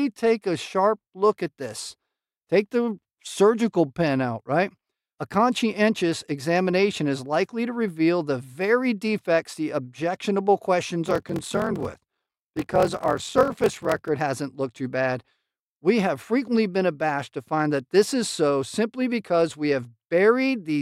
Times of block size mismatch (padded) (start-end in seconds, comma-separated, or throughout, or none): 11.04-14.08